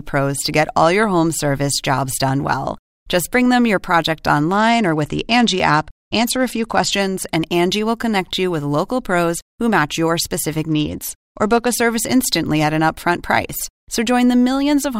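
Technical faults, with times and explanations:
4.52 to 6.93 s and 10.68 to 11.75 s, Bluetooth SBC bit pool drop: just after "bring them your project" and again after "who match your specific", the treble dulls and a gritty noise rises, then clears before "service instantly at an". This fits a link that cut the SBC bit pool from 28 to 11, near 90 kbps. With so few bits the top sub-bands get little or nothing and the rest are coarsely quantised, until the rate recovers.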